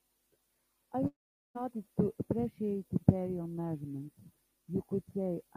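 A long network dropout runs from 1.07 to 1.57 s. The last sound smears into a short fading buzz, then about 420 ms of near silence follows. Speech resumes with 480 ms missing, likely because packets stopped arriving and the receiver padded the gap.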